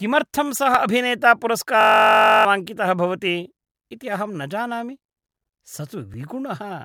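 At 0.75 s there is a small jump in the speech, as if a few milliseconds were cut out and the edges joined with no gap. This is likely a dropped buffer (overrun), where samples were overwritten before the program collected them.

From 1.81 to 2.45 s a system hang loop repeats one 21.33 ms slice about 30 times, producing a steady buzz at 46.9 Hz. The slice length fits a 1024-sample buffer. The hardware kept cycling it while the system stalled, and around 0.7 s of audio never arrived.

At 6.14 s the same kind of skip returns, again a loss of a few milliseconds spliced straight across, consistent with a second dropped buffer.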